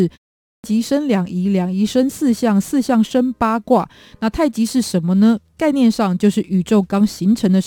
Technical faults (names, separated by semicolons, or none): clipped start after a pause